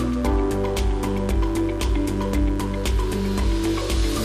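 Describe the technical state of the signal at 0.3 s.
At 0.3 s the signal carries mains buzz, present throughout the clip rather than starting or stopping there. Somewhere in the chain, switching spikes from a 50 Hz supply are getting into the audio, twice per mains cycle, so the interference carries a dense ladder of 50 Hz harmonics reaching well into the kilohertz range. It sits roughly 25 dB under the wanted sound, heard as a steady, raspy buzz running beneath it.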